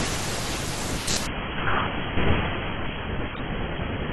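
From 1.27 s to the end, an adaptive stream at a lower bitrate cuts in abruptly: nothing above 3.7 kHz remains, with coarser artefacts suggesting a drop to around 16 kbit/s.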